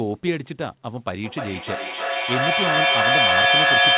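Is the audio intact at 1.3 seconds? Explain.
No. From 1.23 s to the end of the clip there is feedback echo between two devices: a second device in the room replays the call audio, and the microphone picks it up again. The echo canceller only removes its own device's output, so the speech returns about every third of a second, thinner and ringing, and builds up to about 9 dB above the speech. On a spectrogram this appears as evenly spaced, smeared copies stacking below 4 kHz; on a waveform the envelope swells.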